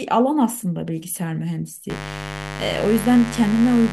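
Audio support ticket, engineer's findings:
Mains buzz, 1.90 s to end of clip. Steady raspy buzz on a 50 Hz fundamental, sitting under the speech at roughly 10 dB below it. Probable source: dimmer, rectifier or unshielded cable switching twice per mains cycle. Unlike plain hum, which is a smooth low tone, these spikes carry harmonics up into several kHz, giving the edge.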